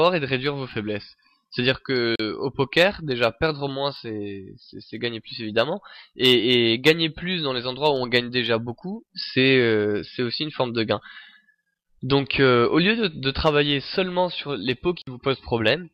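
Two short holes open in the sound, at 2.16 s for about 40 ms and at 15.02 s for about 53 ms, each going silent before the audio picks up further along. This is likely a Bluetooth dropout, with late wireless packets discarded rather than played.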